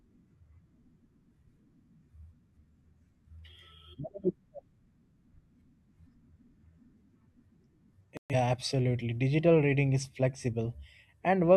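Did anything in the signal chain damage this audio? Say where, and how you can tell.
Yes, there's a digital broadcast dropout at the reception stage. The speech cuts out from 8.17 to 8.35 s, and that stretch never comes back. The receiver hit a few corrupted or missing frames, so it muted until clean frames resumed.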